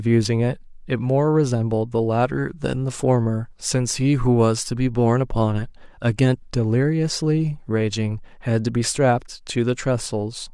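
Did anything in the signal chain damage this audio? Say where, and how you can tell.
No, nothing in the signal chain damaged this audio.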